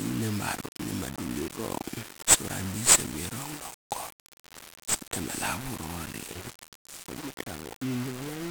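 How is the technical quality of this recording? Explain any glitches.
The technical quality is poor, with heavy damage throughout. 1-bit DFPWM compression runs across the whole recording: each sample is reduced to a single up-or-down step on an adaptive level, so broadband quantisation noise coats the speech, making it fuzzy and crackly, with hiss swamping the treble, consistent with roughly 48 kbps.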